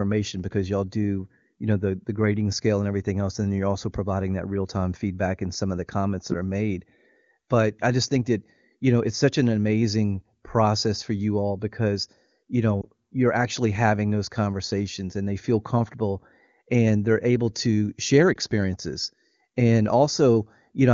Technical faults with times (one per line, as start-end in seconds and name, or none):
12.81-12.88 lost AMR speech frames
18.33-18.37 lost AMR speech frames